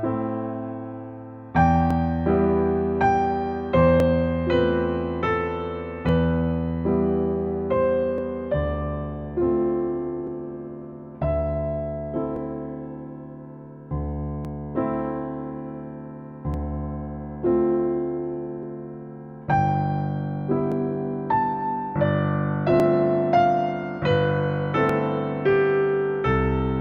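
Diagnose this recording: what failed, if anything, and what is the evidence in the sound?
Buffer stage: clicks recur every 2.09 s from 1.91 to 24.89 s, likely clock drift buffer slips; their strict regularity rules out random dropouts.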